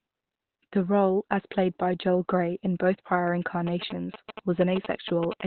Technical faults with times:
0.00-5.46 Opus compression
3.67-5.33 GSM signalling bursts
5.40 GSM phone buzz

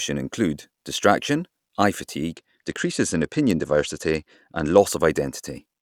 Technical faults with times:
2.33-4.78 Bluetooth SBC bit pool drop

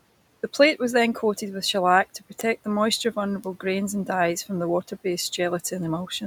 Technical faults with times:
0.36-6.17 word clock ticks

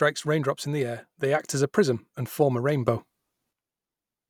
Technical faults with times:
2.88-3.53 sudden gain jump

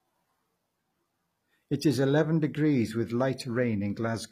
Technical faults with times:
0.00-4.32 HE-AAC compression

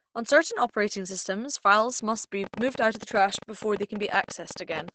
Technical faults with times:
0.00-4.94 Opus compression
2.44-4.89 train of clicks

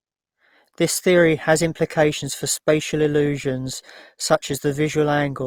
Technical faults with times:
1.16-5.47 adaptive stream at a lower bitrate

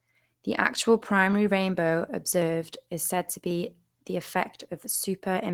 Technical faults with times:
0.00-5.54 Opus compression

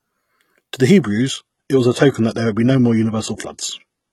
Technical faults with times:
1.02-4.12 adaptive stream at a lower bitrate

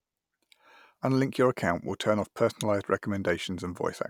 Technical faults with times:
none

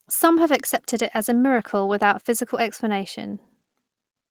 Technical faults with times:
0.43-3.49 call bitrate drop

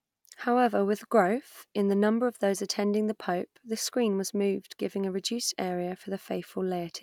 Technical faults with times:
none

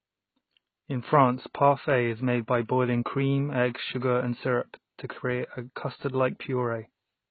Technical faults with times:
0.00-7.30 AAC compression

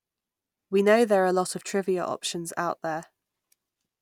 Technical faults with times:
none

